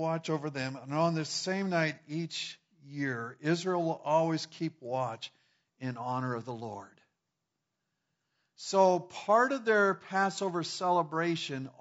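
Speech with plainly audible low-delay AAC compression throughout, rough and grainy, likely AAC-ELD at a bitrate near 32 kbps; a spectrogram shows noise filling between harmonics.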